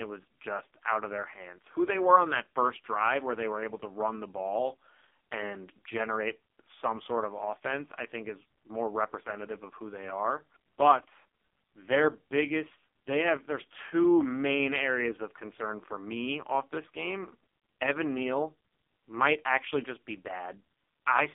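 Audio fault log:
throughout, AMR narrowband mobile codec: the speech sits in a band of roughly 250 Hz to 3.5 kHz with nothing above 3.6 kHz, and heavy buzzy, synthetic coding damage, which fits the lowest 4.75 kbps mode, where too few pulses per frame drive the vocal-tract model.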